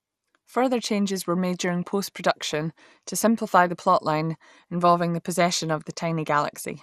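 Throughout the speech, the sound is dull and carries a gurgling, granular distortion, with nothing above 15.1 kHz. This is likely MP2 compression at a low rate, consistent with about 80 kbps, where too few bits shut off upper sub-bands and coarsely quantise the rest.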